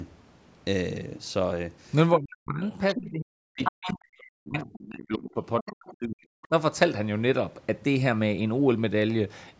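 From 2.19 to 2.63 s the main speech dips by up to about 40 dB. This is speech suppressed in double talk, likely because the echo canceller heard far-side audio at the same time and turned the talker down along with the echo. Unlike a dropout, the signal is attenuated rather than replaced or frozen.

From 2.71 to 3.0 s the other side's voice is leaking through, a second voice that the echo canceller likely failed to remove. It is a separate talker mixed in, not a distortion of the main one.

From 2.95 to 6.51 s the suppression returns, again reaching about 40 dB, for around 3 s in all. The leaked voice sits inside this span at 3.63 to 3.94 s, 4.6 to 4.65 s, 5.6 to 5.95 s and 6.43 to 6.48 s, between roughly 5 and 30 dB below the main speech.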